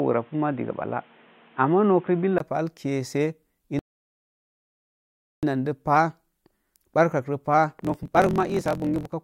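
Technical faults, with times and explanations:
0.00–2.40 s, input switched to a poorer device: likely a change to a narrower microphone path, with a 20 ms gap, a roughly 5 dB level shift and new background noise.
3.79–5.43 s, rebuffering stall: the player ran dry of downloaded audio and halted, adding 1.64 s of silence before resuming cleanly at "də pah".
7.78–9.14 s, block size mismatch (truncated): after "barkakro pah", block tails are discarded, which fits 1024-sample reads, giving a 43.1 Hz buzz and 1.12 times faster sound with the timbre kept.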